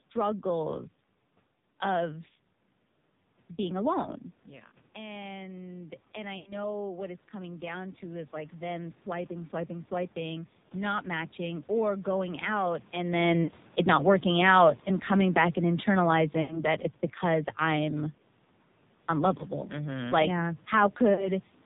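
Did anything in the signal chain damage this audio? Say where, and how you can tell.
Yes. Three faults show up, at the codec, network and call-processing stages.

The codec stage is an AMR narrowband mobile codec applied throughout. Nothing passes above 4 kHz, so the speech sounds boxed in and telephone-like. The coding damage is heavy. The speech is buzzy and synthetic, and the room noise swirls and warbles. That points to a low AMR-NB mode, around 5.9 kbps. At that rate the vocal-tract model gets very few pulses per subframe, so fine detail is replaced by a crude synthetic excitation.

The network stage caused lost AMR speech frames, heard as six dropouts. They occur at 4.68 to 4.73 s, right after "being alone", then 6.38 to 6.53 s, 13.44 to 13.52 s, 16.42 to 16.64 s, 19.38 s and 21.14 to 21.31 s. The single lost frame at 19.38 s sounds like a brief dip or warble. The longer ones at 6.4 and 16.4 s are smeared and fading. 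The decoder is repeating its last good pitch and filter settings with falling gain. Those gaps fit runs of about four 20 ms frames.

At the call-processing stage there is automatic gain falling. Right after "or going out" at 13.11 s, the level sinks steadily by about 5 dB until 17.91 s. The background sinks along with the speech, which shows the gain itself is moving. The talker shifts position near 13 s, but that change would not pull the room noise down. The AGC judged the input too loud, or its background noise too strong, and backed off gradually.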